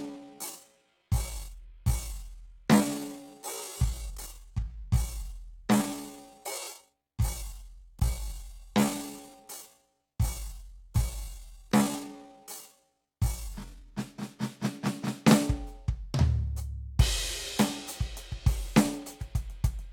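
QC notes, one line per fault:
0.0–13.94 s, time-stretched section: the music runs at about 0.57 times its normal pace while pitch holds steady, so it drags, likely from software repeating short pieces to lengthen it. Unlike a slowed tape or resample, nothing drops in pitch.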